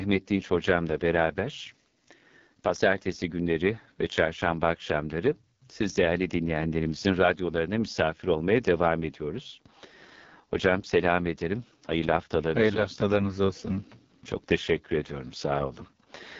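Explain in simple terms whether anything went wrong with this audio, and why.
Yes, something went wrong. The whole recording, from start to finish, passed through the AMR wideband (HD Voice) codec, the phone-call compressor, set to one of its lowest quality settings. At that setting it keeps too little detail to rebuild the speech faithfully, so the voice comes out rough and raspy all the way through. The treble also stops abruptly at about 7.2 kHz, so the speech sounds somewhat dull and phone-like.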